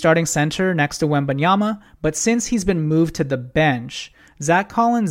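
From 2.10 s to 4.95 s the speech picks up crude rate conversion: linear interpolation from a rate that suggests 48 kHz down to 44.1 kHz, unfiltered. Spurious inharmonic tones sit well below the signal and give a gritty fizz on loud, bright syllables. A spectrogram shows faint stray lines not aligned with the harmonics.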